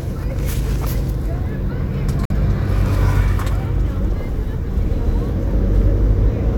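At 2.25 s the audio cuts to silence and returns at 2.32 s as if it had kept playing, with about 46 ms of sound missing. This is most likely a Bluetooth dropout: packets arrived too late and were discarded, which fits two lost frames.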